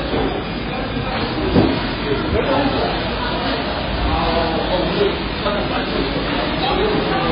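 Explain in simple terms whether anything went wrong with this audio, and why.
Something did go wrong, and it runs through the whole clip: the audio sounds heavily damaged by MP3 compression, which is the likely cause. Nothing is heard above about 5 kHz, so the top end is cut off and the sound seems dull and boxed in. Quiet details flicker in and out, giving a watery, swirling quality. This happens when an encoder is starved of data, drops the treble entirely, and throws away the weakest parts.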